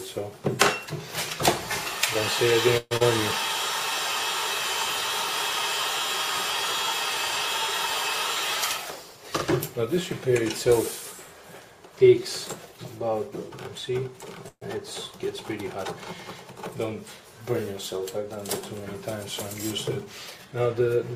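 A call-style recording with three kinds of network trouble. From 2.77 to 3.02 s there's a long network dropout: the sound turns into a fading buzz for about 230 ms, goes fully silent for the last 40 ms or so, and when it returns roughly 120 ms of audio is simply gone. That's likely packets lost outright with concealment filling the hole, and the timing afterwards sits about 50 ms shifted. At 14.48 to 14.63 s there's a call audio freeze. The sound hangs as a decaying buzz for about 130 ms, with around 80 ms of that silent, then picks up exactly where it stopped, so nothing is lost but a 132 ms gap is inserted. That points to packets held up in transit and the jitter buffer running dry, likely, rather than actual loss. Then there's a jitter buffer speed-up in two places, 8.78 to 9.18 s and 20.05 to 21.11 s. In both, playback runs at about 109% of normal speed while the pitch stays put, so things feel a bit rushed. 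The receiver is trimming pitch-period-sized slices to drain a backlog, around 40 ms in the first stretch and about 100 ms in the second.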